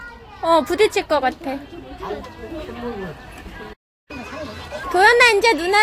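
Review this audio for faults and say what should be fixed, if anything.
Playback stall from 3.73 to 4.11 s: the sound cuts to silence for about 0.36 s, likely because the player ran short of data, then resumes where it stopped rather than skipping ahead as a dropout would. A larger playback buffer would prevent it.

Catch-up at higher speed from 4.11 to 4.84 s: the backlog plays at 1.5x, with tempo and pitch both rising, roughly seven semitones. A pure pitch fault would not change tempo. Rejoining live playback by dropping the backlog, instead of resampling it, would prevent it.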